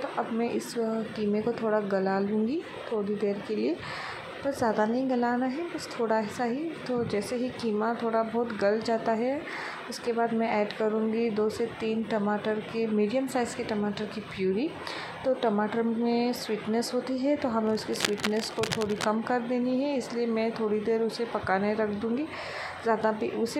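Cable scratch noise runs from 17.66 to 19.04 s: dense, uneven scratching and rustling laid over the sound, only a little quieter than it. The likely cause is a worn cable or connector being moved, its contact resistance fluctuating rapidly and injecting noise bursts.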